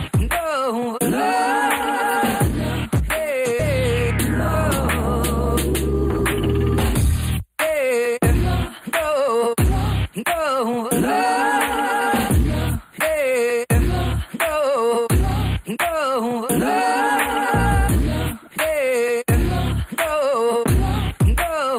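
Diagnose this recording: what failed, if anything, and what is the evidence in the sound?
Channel delay (comb filtering) runs the whole way through, at the wiring or driver stage. The sound is thin and phasey, with a notch somewhere around 5 kHz and more above it. One channel lags by roughly a tenth of a millisecond, which fits a few samples, and the mono sum cancels there.

A skip ahead hits at 3.59 s. Playback jumps straight forward with no gap filler, and roughly a second of audio just isn't there. It's a network-side fault: audio was dropped, either in transit or by the jitter buffer overflowing, while later audio was already queued, so the two edges get spliced together almost seamlessly.

Jitter buffer speed-up kicks in three times: 6.89–8.15 s at 109%, 9.05–9.50 s at 110% and 10.19–10.88 s at 108%. The pitch stays put but things feel rushed. The receiver was trimming pitch-period slices to drain excess buffered delay, roughly a tenth of a second at most per stretch.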